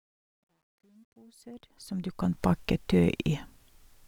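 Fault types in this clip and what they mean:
Truncation distortion on a fade: from 0.0 to 2.45 s, during the fade-in, the rising level is rendered with too few bits and no dither, which fits a stage keeping about 11 bits. At the quietest part, 0.0 to 1.49 s, the waveform collapses into coarse square steps, so the speech comes through gritty, before the fade smooths out at 2.45 s.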